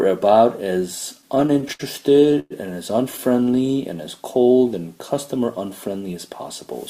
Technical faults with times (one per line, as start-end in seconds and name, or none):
1.21-2.52 repeated stalls (stutter)
3.29-3.98 jitter buffer slow-down